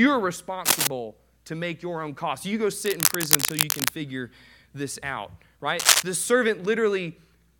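Speech with three bursts of cable scratch noise: 0.65–0.87 s, about 5 dB above the voice; 2.85–3.89 s, roughly level with it; and 5.79–6.03 s, about 10 dB above. The dense, uneven scratching likely comes from a worn cable or connector shifting contact resistance.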